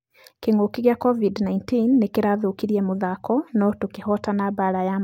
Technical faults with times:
none

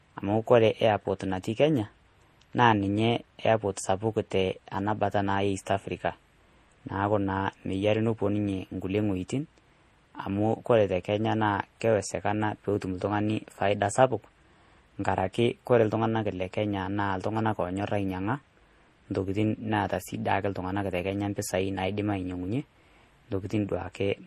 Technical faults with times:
0.00-24.26 transcoding between lossy codecs

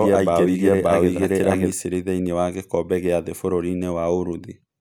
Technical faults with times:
0.00-1.72 doubled audio track

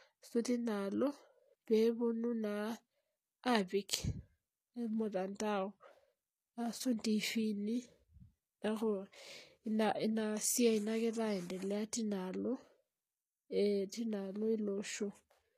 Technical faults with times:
0.00-15.57 HE-AAC compression

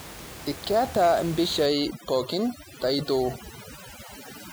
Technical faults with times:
1.66-4.53 overdone noise removal

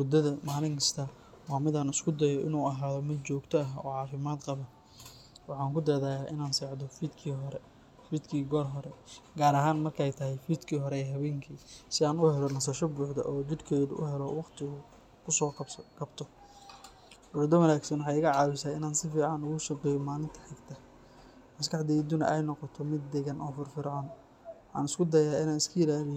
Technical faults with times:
none

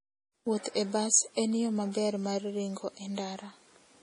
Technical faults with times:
0.00-4.03 MP3 compression

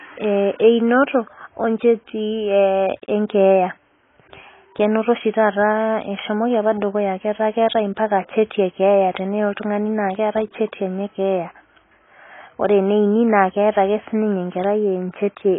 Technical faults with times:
0.00-15.59 AAC compression

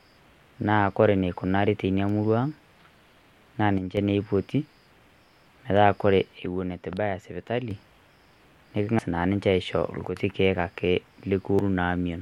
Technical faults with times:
2.09 electrical switching spike
3.78-3.97 one channel drops out
6.38-7.71 one channel drops out
8.99 compressed frames skipped
10.09-10.16 one channel drops out
11.50-11.59 compressed frames skipped

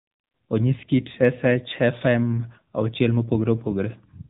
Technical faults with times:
0.00-4.29 AMR narrowband mobile codec

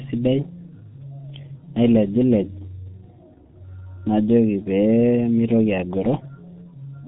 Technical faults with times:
0.00-7.08 G.723.1 codec

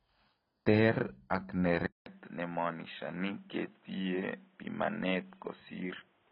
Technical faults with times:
0.00-6.32 AAC compression
1.86-6.32 input switched to a poorer device

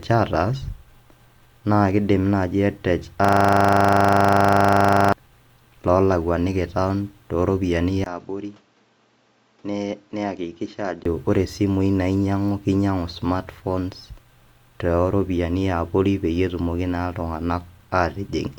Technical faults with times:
3.25-5.12 system hang loop
8.04-11.05 input switched to a poorer device

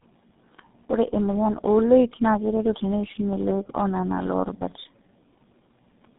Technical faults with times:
0.00-6.18 tandem speech coding

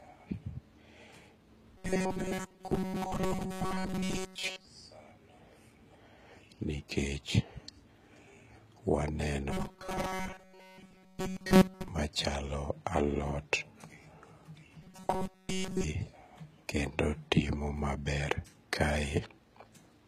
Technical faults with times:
0.00-20.07 HE-AAC compression
1.78-4.65 robotic sound from repeated short buffers
9.51-11.88 robotic sound from repeated short buffers
14.82-15.84 robotic sound from repeated short buffers

